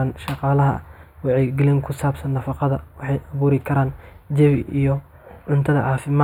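Throughout the speech, a channel delay (comb filtering) is present. One channel runs a few samples late, about 0.07 ms. Summed to mono, the shared content cancels at spaced frequencies. The first notch sits near 7 kHz, dulling the top and leaving a hollow tone.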